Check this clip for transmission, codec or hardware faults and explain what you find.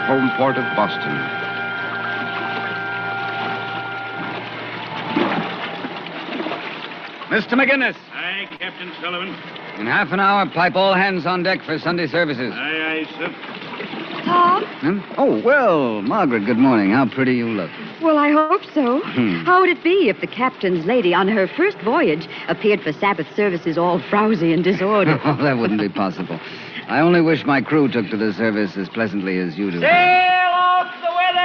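Two transmission faults show up, both from packets arriving late.

At 8.56 to 8.63 s there is a short stall from a late packet. The jitter buffer ran dry, so the receiver held the last sound for about 35 ms. It sounds like a brief stretch with a slight buzz or dip. Nothing is lost. The audio then runs 35 ms later.

At 18.39 to 18.53 s there is a call audio freeze. The sound hangs and is continued as a fading buzz or hiss for about 110 ms, never dropping to silence. The likely cause is packets held up in transit, emptying the jitter buffer. Playback resumes where it stopped, 110 ms later.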